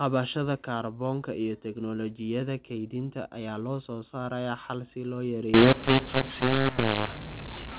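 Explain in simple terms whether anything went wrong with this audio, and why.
Mu-law and A-law mixed up, from 5.54 s to the end at 7.78 s: telephone audio stored with the mu-law scale was read back using the A-law scale. Loudness levels get scrambled, so the speech turns harsh and distorted and the pauses fill with hiss.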